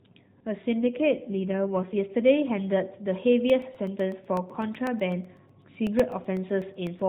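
From 0.80 to 1.98 s, the speech turns rougher and more synthetic. This is an AMR rate drop. The mobile codec was pushed to a lower rate, and the spare bits went to error protection. The roughness fits a fall from 12.2 to about 5.9 kbps. The band does not change and nothing goes missing. It still ends at 4 kHz, as AMR narrowband always does. The added buzz lifts once the rate recovers.

From 3.50 to 7.00 s, regular ticks appear. These are periodic USB or driver dropouts. Something stalled the audio path every 0.125 s, eight times a second. Each time, about a millisecond of audio was replaced by silence. That makes about thirty small holes in all. Each gap cuts the waveform abruptly, so it clicks. The clicks are heard only while there is signal.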